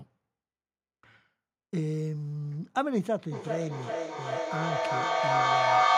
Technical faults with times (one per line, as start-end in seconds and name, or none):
3.31-5.98 feedback echo between two devices